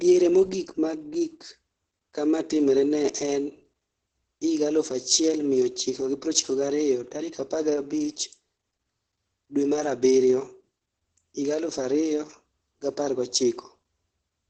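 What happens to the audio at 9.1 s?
Opus voice compression runs through the whole clip, including 9.1 s. The SILK linear-prediction coder keeps only a wideband signal, with nothing above about 8.8 kHz, and codes the excitation coarsely, which fits a bitrate near 10 kbps. The speech sounds muffled, hoarse and slightly robotic.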